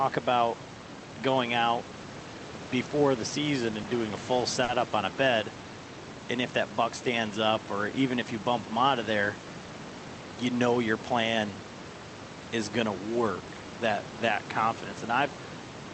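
Speech recorded with room noise about 15 dB below the voice and band-limited at 8 kHz by the Opus call codec. A short stall from a late packet occurs at 4.63 to 4.69 s. The jitter buffer ran empty, so the receiver stretched the last sound by about 50 ms until the packet arrived, then resumed from the same point. Nothing is lost, but that sound is held too long.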